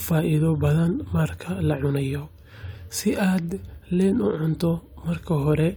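No technical faults can be heard anywhere in the recording.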